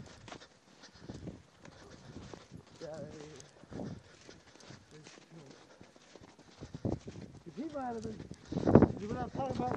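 Nothing technically wrong turns up anywhere in this audio, so there are no faults to place in time or trace to a cause.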